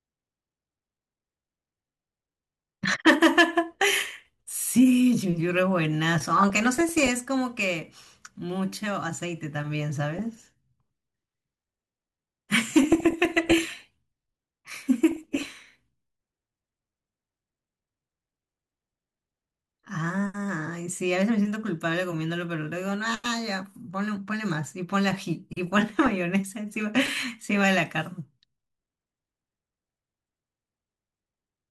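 DAB burbling at 6.38–7.10, 10.19–10.43, 12.83–13.80, 15.11–15.46, 25.67–26.11 and 29.71–30.27 s: reception bit errors corrupt sub-band samples, producing short blips of noise in single sub-bands over the speech.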